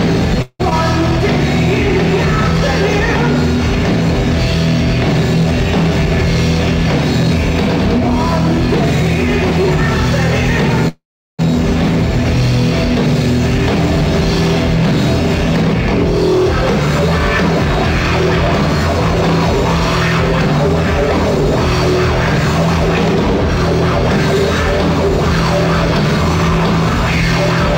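Packets were likely held up in transit, emptying the jitter buffer and causing two call audio freezes: at 0.42 to 0.61 s the last sound is stretched into a fading buzz or hiss for about 175 ms, and at 10.88 to 11.41 s it fills about 505 ms, falling silent for most of that wait. Each time the audio resumes where it stopped, delayed rather than cut. Just after the first freeze, at 0.69 to 0.73 s, later audio was already queued when a stretch was dropped, producing a skip ahead: playback jumps past about 70 ms of sound, joined with only a very brief fill.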